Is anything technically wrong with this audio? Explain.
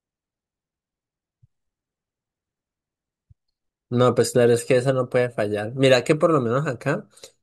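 No, nothing is technically wrong with this audio.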